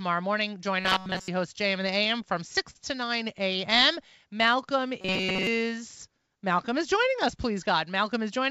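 From 0.80 to 1.28 s the speech turns into a rigid, metallic buzz at 188 Hz: robotic sound from repeated short buffers. It is likely caused by audio arriving too seldom, so a roughly 5 ms slice, one cycle of 188 Hz, is looped in place of most of the real signal. On a spectrogram this shows as evenly spaced horizontal harmonics at multiples of 188 Hz, in a band that stops at about 7 kHz as the G.722 path does throughout.

Between 1.56 and 2.77 s come repeated stalls (stutter): six brief holds where the jitter buffer ran dry and the last sound was stretched, about 97 ms in all and none longer than 44 ms. Nothing is lost, but the audio drags and hiccups. The waveform shows short smeared repeats at each hold.

From 5.01 to 5.47 s the same 188 Hz robotic buzz returns, with the same harmonic comb on the spectrogram.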